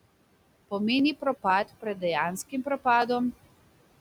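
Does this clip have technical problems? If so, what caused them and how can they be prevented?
Yes. Noise suppressor artifacts run through the whole clip: the suppressor pulls the room noise, which sits about 19 dB below the speech, down by about 21 dB between words, so the background pumps up and down. Preventing this means lowering the suppression depth or reducing room noise at the microphone so less processing is needed.

Overlapping chunks cause short stutters at 0.99, 1.50, 2.01, 2.51, 3.02 and 3.53 s. Each new half-second chunk begins 6.5 ms before the previous one ended, so that sliver plays twice and a click lands at every join. Preventing this means aligning chunk boundaries exactly or crossfading the overlap instead of concatenating it.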